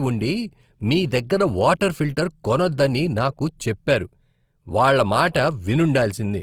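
Throughout, the speech sounds plainly grainy and rough, with voiced tones carrying a noisy, hissy texture, though the bandwidth still reaches about 20.2 kHz. This is likely Opus compression in its CELT mode at a low bitrate, fitting around 24 kbps, filling starved bands with noise-like content.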